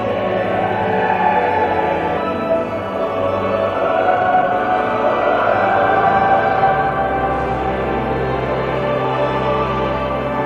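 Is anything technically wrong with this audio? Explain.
Yes, there are two faults.

At 2.17 s there is a skip ahead. About a second of audio was dropped while later audio was already queued, so playback jumps forward and joins the two sides with no gap. Unlike a dropout, nothing is left silent or filled in. The sound simply lurches on.

From 4.10 to 4.51 s there is a jitter buffer speed-up. The buffer held too much audio, so the receiver trimmed short pitch-period pieces repeatedly, removing around a third of a second. The sound runs at 177% speed yet keeps its pitch, which separates it from a sped-up tape effect.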